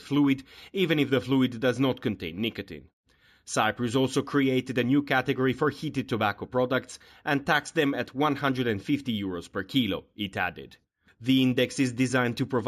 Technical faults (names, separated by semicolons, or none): imaging from linear upsampling